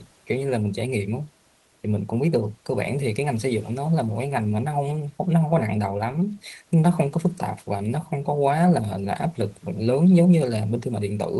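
There are no technical faults to describe in time order; the only background sound is the room noise, about 38 dB below the speech.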